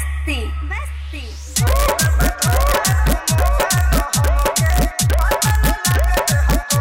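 Integer overflow runs throughout: a tiny fraction of samples, the very highest peaks, exceed the integer limit with essentially no gain push and wrap to the opposite sign, producing sharp cracks on loud moments. The waveform shows peaks jumping full-scale across zero; the spectrogram shows thin broadband vertical streaks.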